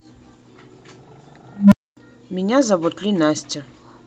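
At 1.57 s an unstable filter's feedback runs away: a low tone near 200 Hz swells within 0.15 s, clips, then drops into 0.25 s of silence.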